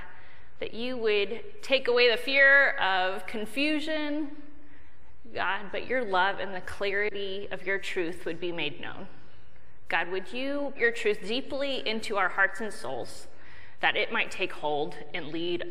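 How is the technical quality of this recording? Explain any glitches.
Two glitches of one kind interrupt the recording: compressed frames skipped, at 6.53 to 6.56 s and again at 10.75 to 10.78 s. In each, whole blocks of encoded audio were never played, so the sound jumps forward. That is roughly one frame (about 40 ms) at 6.53 s and around five frames (about 200 ms) at 10.75 s. A block length of 42.7 ms fits. Unlike a dropout, no silence fills the gap; the timeline simply leaps ahead.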